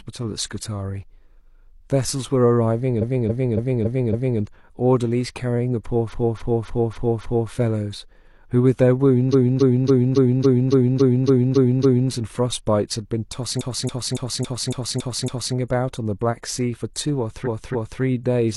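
Speech that stutters five times, the same 278.6 ms block looping 5, 5, 10, 7 and 2 extra times at 2.98–4.37 s, 6.09–7.48 s, 9.29–12.08 s, 13.56–15.51 s and 17.42–17.98 s. These are repeated frames: a run of compressed frames decoded again and again, which lengthens the audio.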